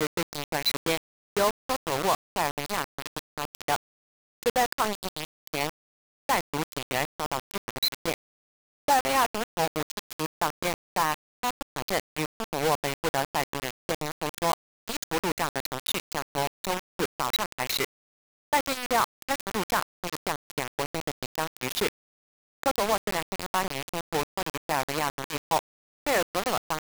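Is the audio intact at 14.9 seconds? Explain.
No. At 14.9 seconds, as throughout the clip, the sound is coarse and grainy, with distortion that moves with the signal and quiet passages that break up or sputter. The likely cause is low bit depth without dither: the audio was rounded to about 3 bits, leaving error only a few decibels below the signal. A waveform would show staircase steps, and a spectrogram would show broadband noise that rises and falls with the signal.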